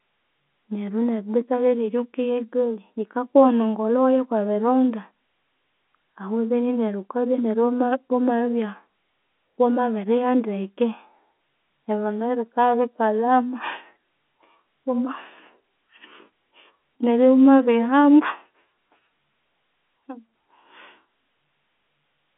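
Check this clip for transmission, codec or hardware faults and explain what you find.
Nothing here points to a fault: the speech comes through the ordinary telephone channel, coded as G.711 A-law at 64 kbps with the usual band of roughly 200 Hz to 3.5 kHz and nothing above about 3.8 kHz, exactly as that kind of line sounds.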